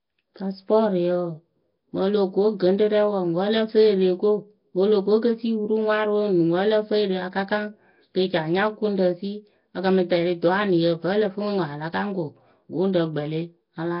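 From start to finish the speech sounds rough, hissy and underwater, with nothing above 5.3 kHz. That's likely heavy Nellymoser compression, which leaves weak bands empty and fills them with noise.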